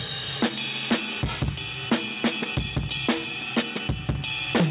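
No technical faults can be heard anywhere in the audio.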